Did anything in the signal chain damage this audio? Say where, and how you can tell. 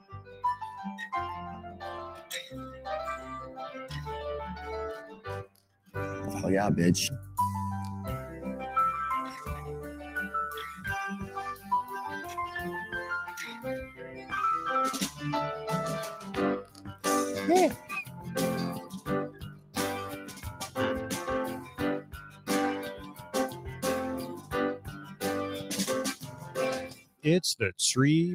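Yes. At the call-processing stage, a speech noise suppressor applied to music or sounds treats steady content as noise, pumping the level through a swing of roughly 15 dB.

Sound cut by the noise suppressor sinks at 0.0–0.44 s (about 15 dB), 1.63–2.27 s (about 6 dB), 5.12–5.95 s (about 16 dB), 10.75–11.71 s (about 8 dB), 13.85–14.32 s (about 10 dB), 16.28–17.04 s (about 13 dB), 17.76–20.77 s (about 16 dB) and 21.54–27.25 s (about 16 dB). Sustained and decaying parts are pulled down while sudden onsets mostly pass.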